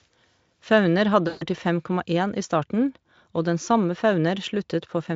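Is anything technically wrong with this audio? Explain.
Yes, there's one clear problem: VoIP packet loss concealed by the speech codec, from about 1.27 to 1.45 s. Roughly 140 ms of the stream went missing, which fits seven 20 ms frames, and the Speex decoder papered over the hole by repeating its last pitch and spectral shape while turning the level down step by step. So the speech smears into a buzzy tone or coloured noise that fades there, and it stays weak or distorted for a short while before it fully recovers.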